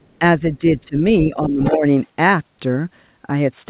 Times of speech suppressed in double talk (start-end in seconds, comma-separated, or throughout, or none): 0.59-1.85